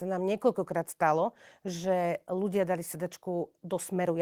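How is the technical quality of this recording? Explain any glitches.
No glitches or technical faults.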